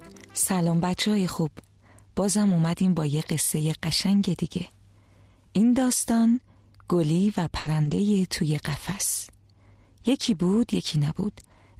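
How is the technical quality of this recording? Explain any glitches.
The recording has one problem area, between 7.59 and 9.28 s, where scattered short gaps break up the stream. Across this stretch a few packets went missing or arrived late, about three separate holes totalling 100 ms. The receiver concealed each one by extending the preceding sound, rebuilding 160 ms and adding 11 ms overall. The longest gap is around 70 ms. You hear brief ticks, smeared patches and small hiccups over roughly 7% of that span.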